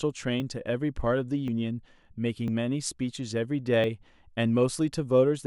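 Samples were likely overwritten before the program collected them, a dropped buffer (overrun). The speech jumps ahead at 0.4, 1.48, 2.48 and 3.84 s, skipping the most, around 70 ms, at 1.48 s.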